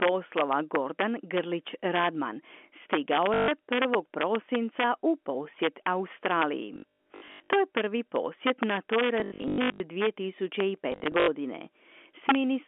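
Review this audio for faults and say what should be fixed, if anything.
Integer overflow runs through the whole recording. A gain or mixing stage drives the speech about 4 dB past the integer limit, and instead of saturating, the out-of-range samples wrap to the opposite sign. Only a small fraction of a percent of samples go over, so the damage lands on the loudest peaks as sudden, violent cracks that are far harsher than ordinary clipping. To prevent it, use saturating arithmetic or a limiter before the integer conversion, and reduce the gain.

Packet loss with the last packet repeated occurs four times. The receiver lost packets and kept replaying the most recent one until new data arrived. The first loss is a solid 0.14 s gap at 3.34–3.48 s. The other three are scattered: 6.74–7.49 s with a longest run of 0.12 s, 9.2–9.8 s with a longest run of 0.1 s, and 10.92–11.28 s with a longest run of 0.08 s. 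The timing fits 20 ms packets. Longer runs buzz at about 50 Hz, which gives the sound a robotic stutter. To prevent it, fix the network loss and replace repetition with proper loss concealment or forward error correction. The G.711 telephone band underneath shows little or no coding damage of its own.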